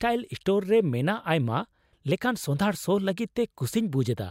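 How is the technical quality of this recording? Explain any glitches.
The recording has no technical faults to report. There are no glitches to explain.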